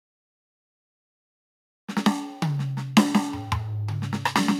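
The music runs continuously with intact frequency content, and nothing in the signal points to a problem anywhere in the capture or playback chain.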